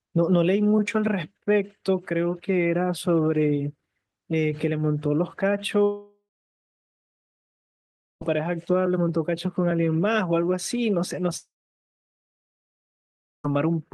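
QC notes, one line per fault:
5.83–8.23 s: long network dropout. The speech stops and about 2.4 s never returns. The last sound carries on briefly as a fading buzz. Roughly 2 s of silence follows. This is likely a stalled stream, with the receiver stretching old audio before giving up. The speech resumes at 8.23 s without the lost part.
11.37–13.46 s: long network dropout. About 2.1 s is lost. The held tail is very short here, barely a tenth of a second. Nearly 2 s of silence follows, likely from the same kind of stall. Speech returns at 13.46 s, again without the missing stretch.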